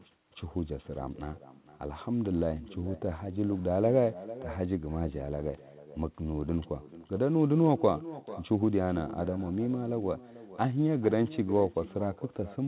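Right from the start there's echo with no canceller: the far end is playing the call over a loudspeaker and its mic feeds it straight back, so every phrase gets a thin, quieter copy trailing about half a second behind, sitting about 17 dB under the speech.

Underneath that, there's clock drift between sender and receiver. The sender's clock is running fast, somewhere around 4 percent, so the receiver's jitter buffer keeps filling up. That hangs over the whole clip, and the band-limited sound, topping out at 4 kHz, points to a G.711-style call path.

That drift shows up as repeated timing corrections from 0.24 s through 12.43 s. The receiver keeps trimming short slices to catch up with the faster sender, always dropping rather than repeating, but at uneven gaps. Each cut is tiny, so at most they come across as little hiccups or a slightly lurching tempo.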